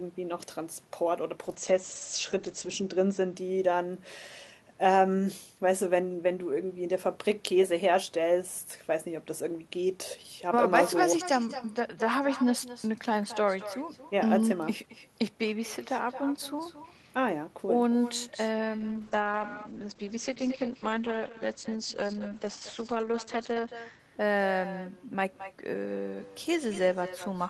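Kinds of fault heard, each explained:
Echo with no canceller: The far end plays this speech through a loudspeaker. Its microphone picks it up again, and nothing removes it. So the speech returns after a round trip of about a fifth of a second. The copy sits about 13 dB below the original. It is thinner. It shadows every phrase for the whole clip, so the speech sounds doubled and smeared.
Call bitrate drop: The call's bandwidth estimate fell, so the encoder was told to spend far fewer bits. It then coded the speech more coarsely and cut off the top of the spectrum. The audio closes in to about 8 kHz from a full 20 kHz, and it turns rough and watery. This happens from 1.44 to 3.41 s and again from 18.79 to 24.05 s. The second drop holds its worst for 4.89 s. The sound points to a fall from around 40 kbps to roughly 10 kbps.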